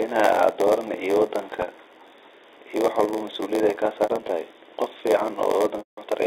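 Telephone-band speech, and the whole thing carries a block size mismatch (padded). There's a steady buzz at 86.1 Hz and everything plays at 0.938 times normal speed while keeping roughly its usual timbre. That fits a stage writing short blocks into a 512-sample read, with zeros filling the rest of each block and leaving a tiny gap every cycle. On top of that there are three stretches of packet loss with pitch repetition. At 1.62 to 1.67 s about 40 ms goes missing, and the concealment just repeats the last pitch cycle, so it comes across as a briefly held, buzzy tone. From 4.03 to 4.29 s about 120 ms of loss is scattered over a 240 ms stretch, with the longest run 60 ms, giving a choppy run of repeated cycles and fades. The worst is 5.78 to 5.98 s, where roughly 180 ms is gone and the repeated pitch fades out to silence before speech cross-fades back in. The G.711 line band of 300 to 3700 Hz is just the expected phone-channel bandwidth.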